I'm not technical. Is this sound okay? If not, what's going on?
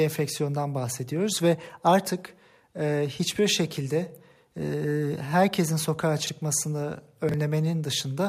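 No. The sound was handled in small pieces of about 23 ms and some were put out of order, called chunks out of order. At 6.22 s, just after "herkesin sokağa", and again at 7.29 s, a piece plays late, causing a brief jumbled moment.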